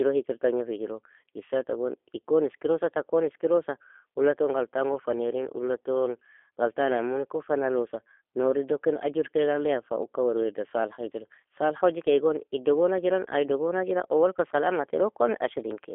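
Speech with G.729 codec damage throughout. The band runs only from about 300 Hz to 3.5 kHz, but a plain telephone filter would leave the voice smooth. Here it also sounds rough and slightly synthetic. That comes from rebuilding each 10 ms frame from a vocal tract filter, a pitch predictor and a few pulses rather than the waveform itself, which fits an 8 kbit/s G.729A stream.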